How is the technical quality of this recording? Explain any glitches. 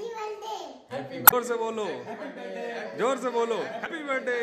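The recording has two short glitches, both from damaged data in a compressed stream, at 1.24 to 1.34 s and 3.83 to 3.87 s. Corrupted bytes make the decoder misread frames and hunt for the next valid header. The result is a brief chirp, squawk, click or short hole.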